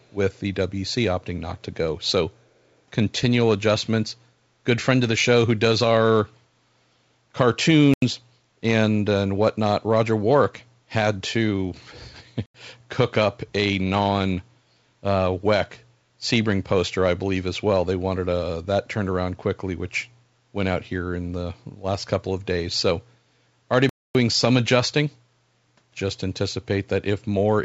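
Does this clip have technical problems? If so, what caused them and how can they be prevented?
Yes. There is a faint echo leak right at the start, from 0.00 to 0.12 s. A delayed copy of the speech comes back about 381 ms late. It sits very low, far below the main speech. The likely cause is a far-end loudspeaker whose echo canceller did not remove all of the playback. Its microphone picked up the playback and sent it back. To prevent it, use headsets or give the echo canceller a clean reference and time to converge.

There are three blocks of digital silence. They fall at 7.94 to 8.02 s, 12.46 to 12.54 s, and 23.89 to 24.15 s. The first two last 85 ms each, which fits a missed 4096-sample output buffer. The third lasts 256 ms. Each time the audio cuts out and returns with no fade. The clip came through a G.722 call path, which carries nothing above 8 kHz. To prevent them, make sure the audio thread always fills its buffer on time.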